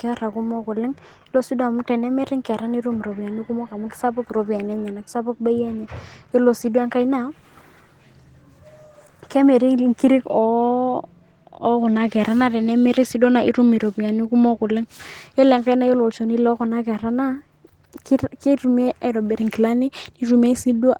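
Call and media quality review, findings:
Opus voice compression, throughout the clip. Speech plainly hoarse and slightly robotic, with band extending to about 20.1 kHz. Sound points to hybrid mode near 16 kbps: SILK coarsely coding excitation below 8 kHz, thin CELT layer above, 20 ms frames.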